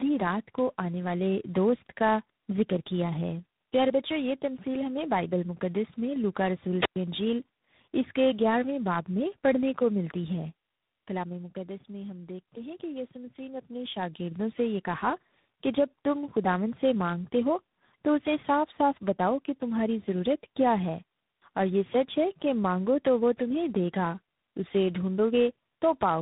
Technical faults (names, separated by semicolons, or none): tandem speech coding; zipper noise